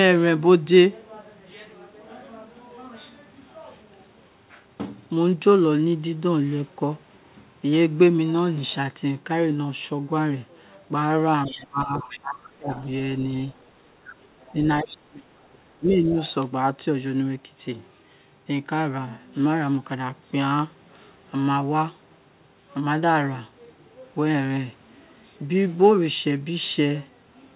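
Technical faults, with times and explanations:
11.46–12.84 s, 13.52–13.70 s, 14.12–14.52 s and 16.24–16.34 s: other side's voice leaking through. A second voice sits under the talker, strongest in the first stretch at about 15 dB below the speech, then fainter at about 35, 30 and 25 dB down in the short scraps. The far end was likely playing on a loudspeaker near the microphone, and the echo canceller failed to subtract all of it, so residue passes on in fragments.
11.47–12.70 s and 14.52–16.16 s: speech suppressed in double talk. The talker's level drops in pieces, by as much as about 25 dB at its deepest, adding up to roughly a second within each stretch. Both ends were likely talking at once. Unable to separate near speech from loudspeaker echo, the canceller attenuated everything, so the wanted voice is pushed down along with the echo while the other side talks.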